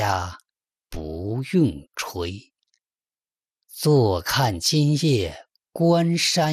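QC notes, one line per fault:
Throughout, MP2 compression: the sound is dull and carries a gurgling, granular grit, with upper frequency bands dropping in and out, which fits a rate near 80 kbps and likely comes from MPEG Layer II coding starving its sub-bands of bits; unlike MP3 swirl, the damage steps band by band.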